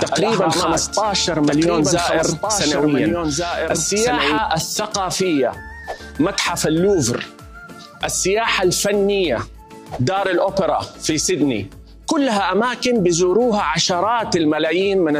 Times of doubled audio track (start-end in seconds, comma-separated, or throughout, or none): 0.00-4.38